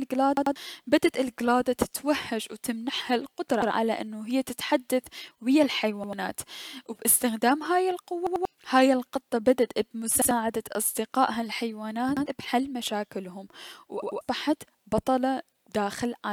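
Repeated buffer at 0.37, 3.62, 6.04, 8.27, 10.22, 12.17 and 14.03 s. New audio arrived late, so the device replayed its last 93 ms block, which fits a 4096-sample buffer. Each repeat is a hard-joined speech stutter, tripled at 0.37, 8.27 and 14.03 s.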